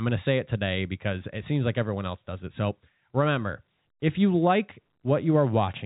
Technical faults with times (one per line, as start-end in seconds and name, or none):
none